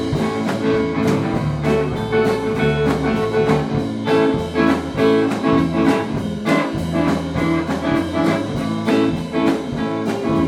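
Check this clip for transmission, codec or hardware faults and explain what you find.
Nothing stood out on listening to this clip.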